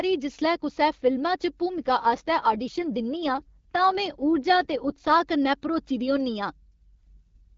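From 1.78 to 5.22 s, ending just before "कन्नै भरोची दी होन्नी", and again from 7.04 s to the end, the speech turns rougher and more synthetic with no gap or band loss. This is an AMR rate drop, consistent with the AMR-WB coder stepping down from 12.65 to 8.85 kbit/s.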